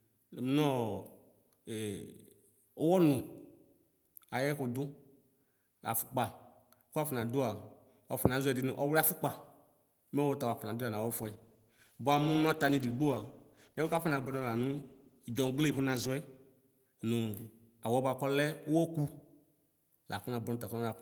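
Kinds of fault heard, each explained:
Call bitrate drop: from 11.19 to 16.17 s the speech turns rough and muffled as the encoder is starved of bits, which fits a fall to about 13 kbps.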